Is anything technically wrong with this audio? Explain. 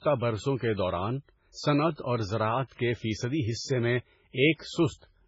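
Yes, there's heavy compression damage running the whole way through this speech clip, most likely MP3 compression. Nothing comes through above about 7.6 kHz, so the top end sounds dull and clipped off. That fits an encoder starved for bits, something like 16 kbps, where it drops the treble at a fixed point and zeroes out weak frequency lines that then flicker on and off between frames. You hear it as a watery, swirly texture, with s sounds turning metallic and attacks smearing.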